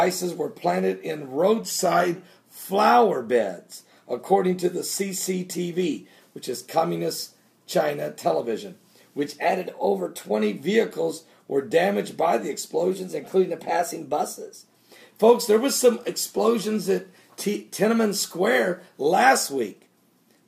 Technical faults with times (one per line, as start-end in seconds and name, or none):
1.65-2.16 drift correction step
9.46-10.32 drift correction step
12.91-14.58 drift correction step